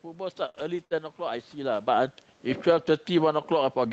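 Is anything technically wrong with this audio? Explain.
Yes, there are four kinds of fault here, all squeezed into the first second except the last one.

Short stall from a late packet, 0.49 to 0.58 s: a packet showed up late, the jitter buffer ran dry, and the receiver stretched the last bit of sound by about 51 ms until it arrived, then carried on from the same spot. Nothing's actually missing, and the delay just grows by those 51 ms. You hear a sound hang on a touch too long with a faint buzzy, dipping quality.

Lost packet rebuilt from error correction, 0.55 to 0.61 s and again 0.90 to 0.97 s: each time a packet was lost, but the next one carried a low-bitrate backup copy, Opus in-band FEC. The decoder played that instead, so there's no hole, but each 60 ms patch sounds rougher and noisier than what's around it, a little grainy blip.

Burst of packet loss, 0.85 to 0.93 s: this one's a real gap. 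Audio arrived too late or not at all, the receiver filled about 60 ms by extending and fading the last sound into a held buzz or hiss, then jumped ahead. Roughly 60 ms of the actual audio is simply gone, so there's a small skip where it resumes.

Automatic gain falling, from 1.56 s to the end: the AGC decided the input was too hot, or its background noise too strong, and eased its gain down steadily. So the level starts loud and then sinks, with the background noise sinking right along with it, which is the giveaway that it's gain and not the talker. There is a genuine shift in the talker's position around 1.5 s too, but the steady slide with the room noise following is the AGC. The whole thing sounds like Opus, fairly band-limited, with coding that points to something around 32 kbps.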